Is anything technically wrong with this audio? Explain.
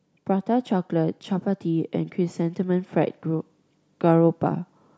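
Yes. From 0.27 to 4.45 s, automatic gain rising occurs. The gain control judged the input too quiet and raised it slowly, so speech and background swell together by about 5 dB.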